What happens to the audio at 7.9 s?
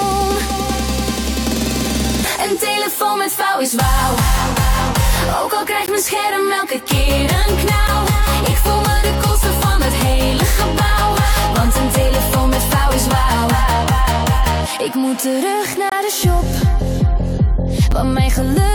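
A brief hard-edged dropout to silence, about 8 ms long, cuts the sound at 7.88 s. This is a gap between stream segments: the time stamps of consecutive segments, which fit 2-second segments, leave a small hole that the player fills with silence. No audio is lost.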